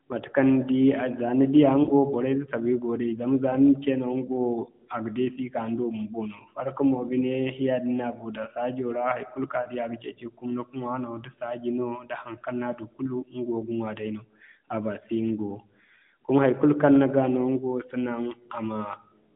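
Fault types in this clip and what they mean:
Lost AMR speech frames: at 1.84 and 9.62 s, the decoder fills two missing 20 ms frames with a smeared, fading repeat of speech instead of a hard silent gap.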